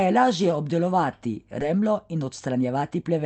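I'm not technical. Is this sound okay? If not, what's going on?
No, it's not. Around 1.61 to 1.63 s, right after "je lažje obdelovati", there's a skip ahead: roughly 0.7 s of speech just vanishes, and the talk jumps straight on.

From 1.75 s to the end, a jitter buffer speed-up kicks in. The call software trims tiny slivers to catch up, so the speech runs about 11% faster and sounds hurried while keeping the same pitch.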